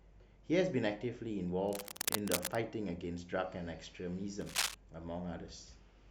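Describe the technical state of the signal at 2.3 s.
At 2.3 s the speech is overlaid by cable scratch noise, running from about 1.69 s to 2.55 s. The likely cause is a worn cable or connector being moved, its contact resistance jumping erratically and injecting dense, irregular bursts of noise roughly as loud as the speech itself. It sounds like scratchy rustling over the voice. On a spectrogram it shows as ragged broadband smears; the waveform carries jagged, uneven spikes riding on the speech.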